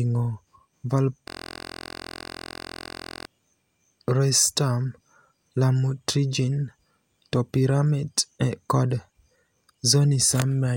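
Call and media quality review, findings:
Steady buzz replacing speech, 1.28 to 3.27 s, at 43.1 Hz. System hang loop: driver or host froze while the audio device kept replaying one 23.22 ms ring-buffer segment, which fits a 1024-sample buffer, 86 times over.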